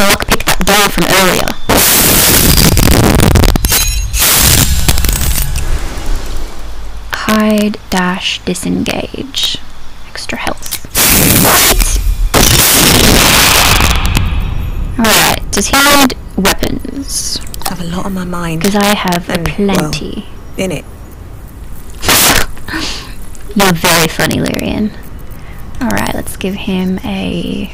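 Violent, sharp cracks burst out on every loud moment across the whole clip, far harsher than ordinary clipping. This is integer overflow: the signal is driven about 21 dB too hot, and around seven percent of samples exceed the integer limit and wrap to the opposite extreme instead of being held there.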